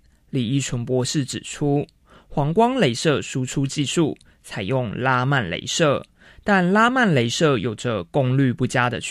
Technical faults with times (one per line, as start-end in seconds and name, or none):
none